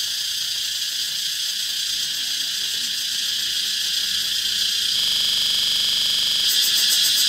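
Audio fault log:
4.99–6.44 s, system hang loop: the system froze while the hardware replayed one 42.67 ms buffer, fitting 2048 samples, giving a 23.4 Hz stuttering buzz.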